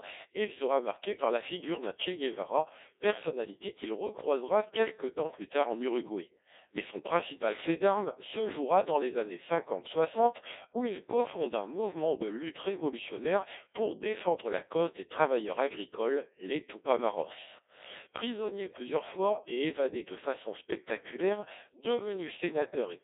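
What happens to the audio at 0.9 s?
At 0.9 s the speech is still passing through a Codec 2 vocoder, which affects the whole clip. The encoder keeps only pitch, voicing, energy and a coarse spectral envelope, and the decoder rebuilds the voice from sine waves, so the original waveform is gone. The heavy damage fits a rate near 1.6 kbit/s. The result sounds robotic and buzzy, squeezed into a 300 Hz to 3.7 kHz line band with nothing above 3.8 kHz.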